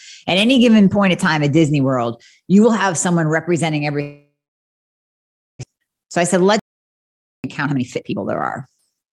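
At 4.01 s, right after "have someone representing every", the speech cuts out. This is most likely a long network dropout. The last sound is stretched into a brief buzz that fades away. Then about 1.27 s of silence follows. The speech returns at 5.65 s, but about 1 s of it never arrives. The gap also adds roughly half a second of extra delay.

From 5.73 s to 9.1 s, a jitter buffer speed-up drains that backlog. The receiver keeps cutting out tiny pitch-period slices. The speech runs at about 116% of normal speed, but its pitch stays the same. It sounds hurried. In total, roughly half a second is trimmed away.

During that faster stretch, a playback stall hits at 6.59 s. The output goes silent mid-flow for about 0.85 s, until 7.44 s. The player has likely run out of data or been blocked. The speech then resumes and is still sped up.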